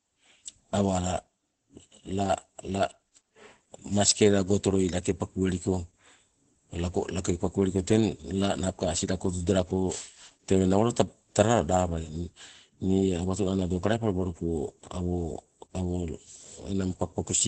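Speech run through Opus voice compression for its whole length, with the SILK linear-prediction coder working at what sounds like a low rate of roughly 12 kbps in wideband mode. The band is cut off, leaving nothing above 8.5 kHz, so consonants lose their crispness. The excitation is coded coarsely, giving the voice a plainly audible hoarse, slightly robotic graininess and a muffled quality throughout.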